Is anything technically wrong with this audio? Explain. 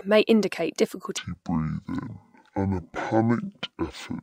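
Yes. From 1.17 s, just after "may indicate", through to the end near "to draw", the fault is stereo read as mono. The interleaved left and right samples are taken as one consecutive stream, so speech runs at half speed, an octave (12 semitones) low, with a faint mirrored image in the upper spectrum.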